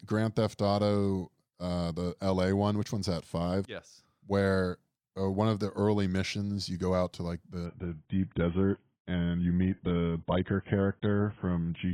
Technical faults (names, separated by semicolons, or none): adaptive stream at a lower bitrate